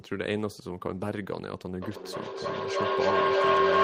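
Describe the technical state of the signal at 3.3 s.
At 3.3 s a feedback howl, running from 1.81 s to the end, rings near 1 kHz, with the loop repeating about every 300 ms and peaking about 9 dB above the speech. Unlike echo, the repeats grow rather than fade as the loop keeps adding gain.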